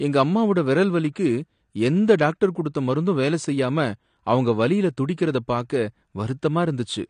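From start to finish the speech carries plainly audible AAC compression damage, likely from low-bitrate AAC-LC coding that fits around 32 kbps. Nothing is present above 9.9 kHz, so the top end sounds dull, and coarse quantisation smears sibilants into a fizzy, warbling texture.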